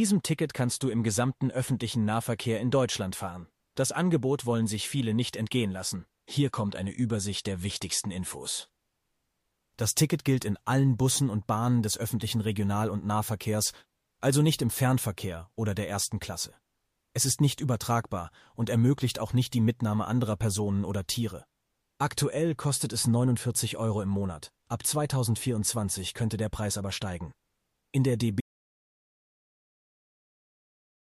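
At 28.41 s the speech cuts off abruptly in an audio dropout to silence. From there to the end of the clip the signal is silent. No room tone, hiss or background remains. The break comes mid-flow rather than at a natural pause. The likely cause is a lost input, such as a disconnected device, a failed link or an accidental mute, while recording carried on. Whatever was said after that point is gone.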